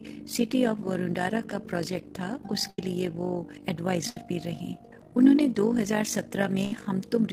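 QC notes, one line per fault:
Throughout, overlap-add ripple. The level swings by about 11 dB at a rate of around 50 times a second. The sound was split into windowed frames and rejoined with an overlap whose gains do not add up to a steady total. Each frame boundary therefore dips or bulges in level. At this rate the pulsing merges into a fast flutter, a rough robotic tremolo over the whole clip. The rate fits a frame hop of roughly 20 ms.
2.69–2.79 s, 4.10–4.17 s and 6.65–6.73 s, burst of packet loss. Each gap is a short stretch where the receiver had nothing to play. It held the last sound and let it fade, filling about 85, 61 and 67 ms respectively. That fill comes across as a brief smeared buzz or hiss. Playback then resumes later in the material, skipping about 90, 60 and 70 ms. The audio jumps past the lost part.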